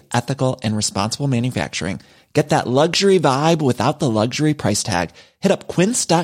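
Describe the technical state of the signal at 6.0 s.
At 6.0 s the speech signal is intact, with no dropout, distortion, glitch or other fault.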